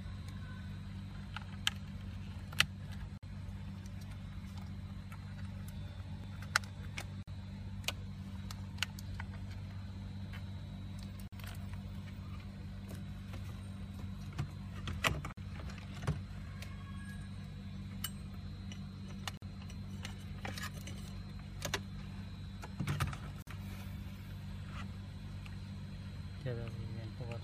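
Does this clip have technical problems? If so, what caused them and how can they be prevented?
Yes: brief dropouts of about 50 ms interrupt continuous sound at 3.18, 7.23, 11.28, 15.33, 19.37 and 23.42 s, every 4 s. This is a gap at a join of encoded pieces, where separately encoded segments kept their encoder start delay and final-frame padding. Prevent it by trimming each segment's encoder delay and padding before joining, or by encoding the audio as one continuous stream.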